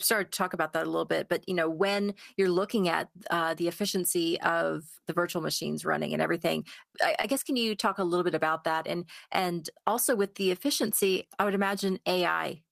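A brief smear from 7.21 to 7.25 s is short concealed packet loss: about 20 ms of speech arrived too late, and the decoder improvised a continuation before blending back.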